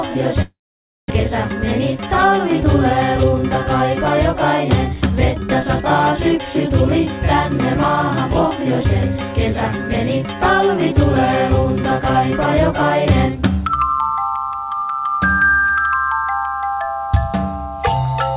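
From 0.42 s to 1.12 s the audio stream likely suffered a long network dropout: incoming packets stopped, and the receiver had nothing to play. What you hear is the last sound stretched into a fading buzz that gives way to silence for roughly half a second. When sound resumes, about 400 ms of material never returns, and the playout delay has grown by roughly 300 ms.

To recover that extra delay, the jitter buffer then performs a jitter buffer speed-up. From 1.28 s to 3.93 s it repeatedly cuts short pitch-period slices, running at 105% and discarding roughly 150 ms. From 4.33 s to 5.64 s it does the same at 107%, removing roughly another 100 ms. Pitch stays put, but the sound is audibly hurried through both stretches. All of this sits within a band that stops at 4 kHz, which is consistent with a G.711 call path.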